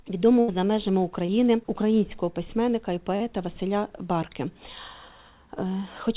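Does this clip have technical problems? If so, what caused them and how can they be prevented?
Yes. There is a burst of packet loss from 0.4 to 0.5 s. About 80 ms of audio never arrived in time. The receiver filled the gap by stretching the last sound it had and fading it down, so you hear a held, dimming tone or hiss. Then the sound picks up further on, with that stretch simply gone. A larger jitter buffer or redundant packets on a steadier connection would prevent this.

Two cases of short concealed packet loss follow, at 1.26 to 1.30 s and 3.16 to 3.22 s. The first patches about 20 ms. The second patches about 40 ms. Each time the receiver continued the preceding sound briefly, then blended back into the real audio. This leaves a quick smear or wobble, and a brief sound can drop out. The band stays capped at 4 kHz, as expected for narrowband G.711 telephony. Forward error correction and a less congested network would prevent these gaps.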